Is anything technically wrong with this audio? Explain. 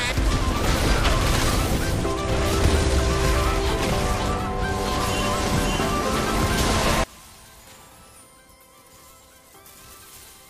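Yes. From 7.04 s to the end, the sound drops by about 24 dB and turns faint, likely from one channel inverted cancelling against the other in a mono sum; the waveform visibly shrinks and the spectrogram fades.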